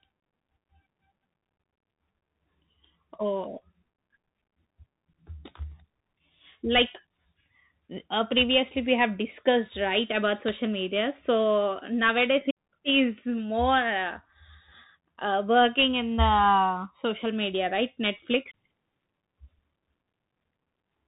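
From start to finish the speech has gone through a Bluetooth CVSD headset codec, and the damage is plainly audible. CVSD sends one bit per sample saying up or down, with a step size that adapts, which fits a 64 kbps link. Everything above about 3.8 kHz is gone, so the sound is boxy and narrow. Sibilants turn scratchy where fast, loud high content outruns the step, and a grainy hiss sits underneath the speech.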